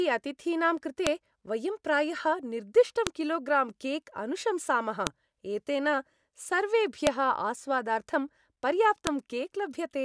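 Speech marked by sharp clicks at 1.07, 3.07, 5.07, 7.07 and 9.07 s, a file header played as audio: 2-second WAV pieces were joined with headers intact, so header bytes sound as snaps.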